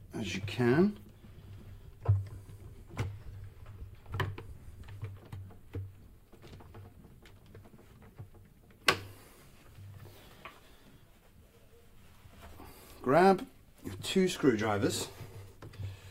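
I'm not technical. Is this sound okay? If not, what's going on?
Yes, the sound is technically in good shape, with nothing going wrong anywhere in the recording.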